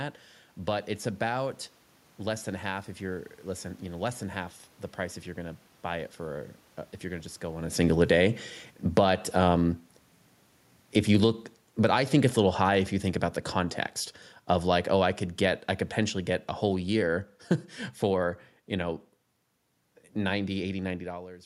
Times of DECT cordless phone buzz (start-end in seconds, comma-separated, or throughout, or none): none